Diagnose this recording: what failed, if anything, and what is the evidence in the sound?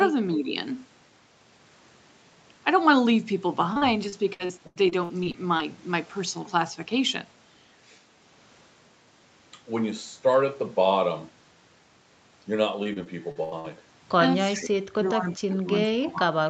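Network stage, repeated packet loss (robotic sound): choppy stretches at 3.73–5.61 s (11 holes, longest 84 ms, about a fifth of the span patched) and 12.83–13.71 s (6 holes, longest 78 ms). The jitter buffer extends the last sound across each missing packet. The bursts are confined to these spans, unlike steady codec noise.

Call processing, echo leak: faint delayed copies of the speech appear at 14.52–14.59 s and 15.30–15.37 s, lagging 392 ms and sitting about 20 and 25 dB down. This is likely an echo canceller letting loudspeaker pickup through. The fixed delay separates it from room reverberation.

Call processing, speech suppressed in double talk: the talker's level drops and dulls at 14.56–14.73 s, 14.91–15.26 s, 15.48–15.69 s and 15.91–16.38 s, by up to roughly 25 dB. These dips are likely the echo canceller muting through overlapping talk. They are quiet holes rather than the repeated, metallic fill of packet loss.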